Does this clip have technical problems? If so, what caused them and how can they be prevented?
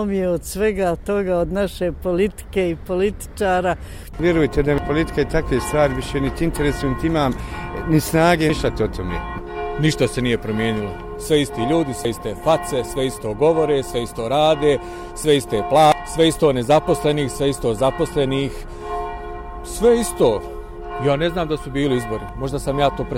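Yes. Damaged data in a compressed stream causes short blips at 4.78, 8.50 and 15.92 s, and longer ones from 12.05 to 12.08 s and 22.29 to 22.32 s. Corrupted bytes break frames, so the decoder loses sync and hunts for the next header. Checksum-verified transfers and error-protected storage prevent this.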